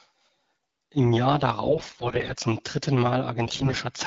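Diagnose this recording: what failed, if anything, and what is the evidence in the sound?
AMR bit errors at 1.65–2.33 s, before "zum dritten", and 3.44–3.76 s, after it: flipped unprotected bits on the radio link misplace excitation pulses, turning speech hoarse and gargly.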